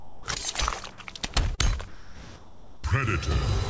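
Comfort noise in place of the background fills 0.00–0.26 s and 1.88–2.84 s, likely because discontinuous transmission stopped sending during pauses and the receiver synthesised a steady substitute. On a spectrogram these stretches show a smooth, textureless band sitting about 21 dB below the loud parts. The first is about 6 dB quieter than the surrounding background, and the second matches its level. A short concealed packet loss at 1.55–1.61 s covers about 30 ms that never arrived. The decoder extended the preceding sound and then blended back, which appears as a brief smeared, repeated-looking patch. Across the whole clip, the spectrogram shows an empty region above 8 kHz, consistent with a wideband call codec such as G.722.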